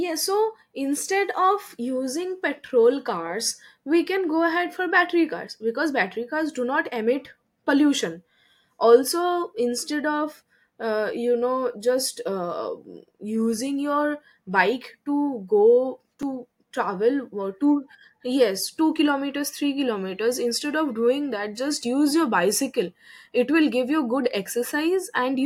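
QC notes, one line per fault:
16.22 s, block of digital silence. The speech drops to silence for about 5.3 ms and then returns. The length fits a 256-sample block left unfilled, so the output buffer was likely not written in time. There is no fade on either side. The waveform jumps straight to silence and back, which puts a sharp edge at each end. At this length the two edges merge, and the gap sounds like a tick or dip rather than a hole.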